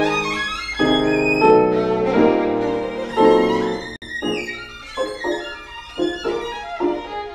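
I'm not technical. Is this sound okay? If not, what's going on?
No. The audio was made in separate pieces that were each compressed on their own and then joined without trimming off the small stretch of silence the compression adds at each piece's edges. The result is a gap at a join of encoded pieces: at 3.96 s the sound cuts out for about 58 milliseconds, with softened edges, then picks up again at 4.02 s right where it left off. The timing suggests pieces about 4 seconds long.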